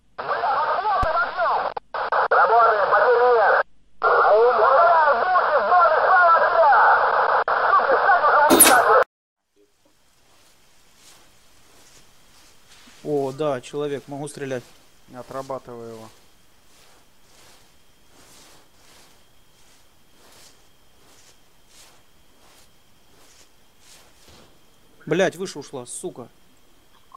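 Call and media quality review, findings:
Lost LE Audio frames at 7.92 s and 24.15 s: two brief noisy smears, about 15 ms each, consistent with two 7.5 ms frames dropped. The LC3 decoder's concealment replays the last spectrum with randomised signs. On a spectrogram, each shows as a narrow smeared vertical band where tonal lines blur into noise.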